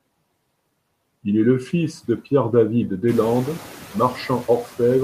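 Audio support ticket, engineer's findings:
Noise suppressor artifacts, throughout. Background drops about 17 dB between phrases and swells back under speech. Band-by-band suppression of steady noise, including the room noise that steps up near 3 s.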